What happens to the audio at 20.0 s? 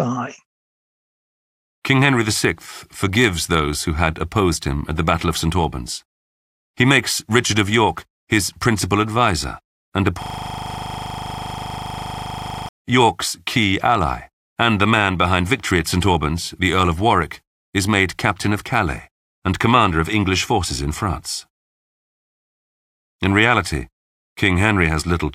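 At 20.0 s the audio is intact, with the speech continuing without any dropout, click, distortion or other audible fault.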